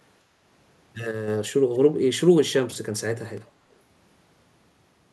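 Speech, with two brief faults. From 1.11 to 1.28 s, one channel drops out, likely because one side of the stereo feed briefly lost its signal. After the mono sum, the speech dips abruptly by about 6 dB, and anything carried only on that side vanishes until it returns. From 1.74 to 1.78 s, an echo leak occurs, likely from a far-end loudspeaker whose echo canceller let some of its microphone pickup back into the call. A very faint, short scrap of the speech returns 274 ms late.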